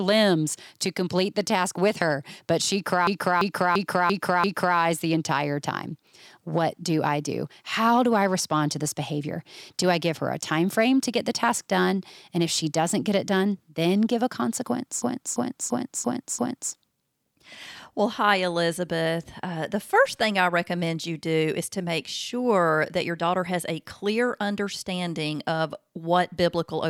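At 3.07 to 4.78 s and again at 15.02 to 16.73 s there's a system hang loop: the driver stalled and the hardware replayed one 341 ms buffer five times, a stuttering repeat at about 2.9 Hz.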